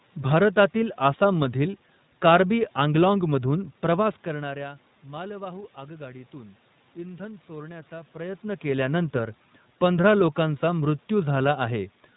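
iLBC codec damage runs through the whole clip and is plainly audible. The speech has been squeezed into narrowband, with nothing passing above 4 kHz, and each 20 ms frame's excitation is coded on its own rather than built from the previous frame. That gives the voice a slightly rough, synthetic grain, and the background room noise is coded poorly. The quality points to the 15.2 kbps mode. The level shifts around four and eight seconds come from the talker moving, not the codec.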